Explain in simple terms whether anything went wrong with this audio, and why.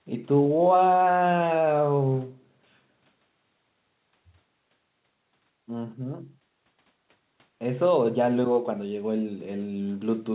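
Nothing went wrong here.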